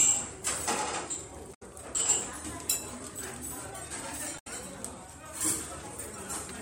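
At 1.53 s the audio breaks up briefly, lasting about 0.1 s, until 1.63 s. This is damaged data in a compressed stream. Some bytes in the encoded file were lost or corrupted. The decoder misreads the frames there, loses sync and hunts for the next valid frame header. The same fault returns at 4.35 s and runs to 4.47 s. It is heard as a brief glitch cutting across the sound.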